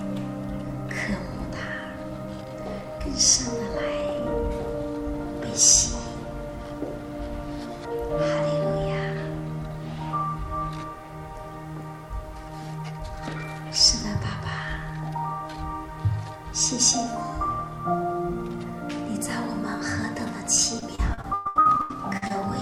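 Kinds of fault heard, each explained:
Repeated packet loss (robotic sound): from 20.79 to 22.32 s the audio breaks into eleven short holes, the longest 119 ms. Each is patched by stretching the preceding sound, so about a third of that stretch is synthetic continuation and the result turns choppy. Unlike a single dropout or one concealed gap, the patches recur in quick succession, giving a sustained stuttering texture rather than one isolated blip.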